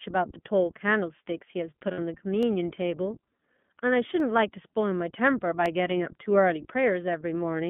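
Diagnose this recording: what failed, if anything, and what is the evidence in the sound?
Speech sounds rough and synthetic and is confined to roughly 150 Hz to 3.4 kHz throughout. This is the iLBC codec at work, coding 20 ms frames at a rate that fits 15.2 kbps.

From 1.92 to 2.00 s a brief, buzzy held vowel replaces about 60 ms, and a shorter one appears at 5.98 s. These are lost iLBC frames on the network, with the decoder repeating the last pitch cycle.

Single sharp clicks occur at 2.43, 4.20 and 5.66 s. These are likely dropped samples at the driver or buffer stage, each roughly a fraction of a millisecond long, making the waveform jump.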